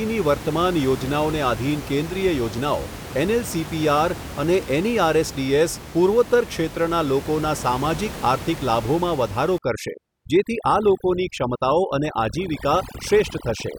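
Overdone noise removal runs from 9.58 s, just after "લાભોમાં વધારો", to the end: an over-aggressive noise reducer gates frequency bands near the noise floor, leaving twinkling near-silence where room noise, about 13 dB below speech, was.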